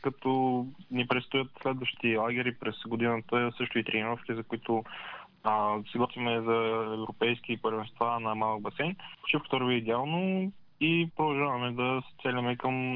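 Nothing here jumps out as a technical problem; the audio just rolls along without any glitches, dropouts or other trouble catching the ear.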